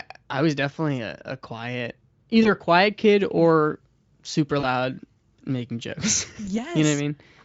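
Speech carried over a Speex link whose high setting leaves little audible codec damage, marred by VoIP packet loss concealed by the speech codec at 2.43–2.48 s, 4.59–4.67 s and 6.45–6.59 s. The gaps, one of about 40 ms and two of about 20 ms, are filled with a fading extrapolation of the preceding sound rather than silence or a click, and the sound stays weakened briefly after. From 3.19 to 7.00 s, pre-emphasis left on lifts the treble by about 10 dB at 10 kHz, following a standard FM-style curve. That makes the sound thin, bright and sibilant, a steady tilt rather than the hoarse, noisy texture of heavy codec compression.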